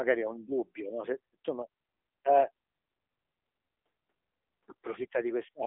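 From start to finish, the speech carries AMR narrowband mobile codec damage. Nothing above 3.8 kHz survives. The band sits between 300 Hz and 3.6 kHz. The vocal-tract model runs at a reduced bitrate. The tone turns plainly buzzy and synthetic, which points to about 7.95 kbps.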